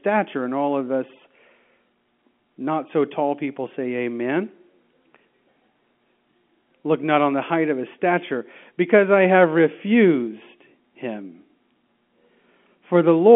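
Nothing stood out on listening to this speech, which comes through over an ordinary narrow telephone-line band.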